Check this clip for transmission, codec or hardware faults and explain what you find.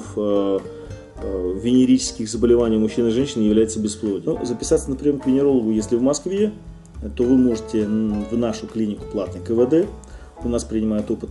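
No transmission, codec or hardware faults turn up anywhere in the signal, which holds steady throughout without dropouts, distortion or interruptions.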